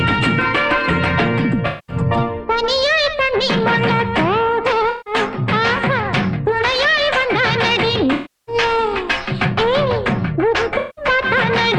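At 1.67–1.96 s, 4.89–5.14 s, 8.13–8.55 s and 10.78–11.05 s, the sound turns smeared and noisy in a way typical of AAC frame loss with concealment. The decoder bridges each dropout of roughly 0.17 to 0.34 s by reusing the last good spectrum, so detail blurs into a hazy, phasey wash. On a spectrogram these patches appear as flattened, stretched bands.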